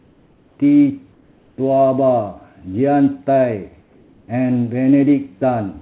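A speech clip with comfort noise in place of the background at 0 to 0.58 s, 1.12 to 1.58 s and 3.82 to 4.28 s: the pauses become a flat, featureless hiss, about 2 to 4 dB quieter, likely from discontinuous transmission. Unlike a noise gate, the pauses never drop to true silence.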